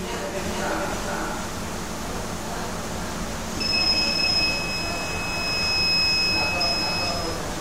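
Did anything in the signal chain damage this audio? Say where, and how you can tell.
Yes. A doubled audio track runs throughout: every sound returns about half a second later at roughly equal level, full-band and dry. That points to a duplicate capture path or misaligned edit, likely at the driver or storage stage. Unlike echo, the copy never decays or repeats.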